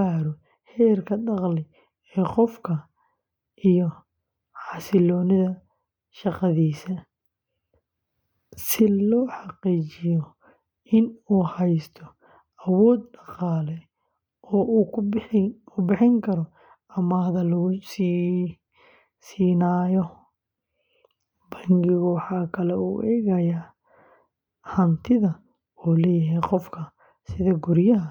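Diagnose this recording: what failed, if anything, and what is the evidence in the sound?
Nothing failed here: there is no evidence in the sound of any fault at any stage.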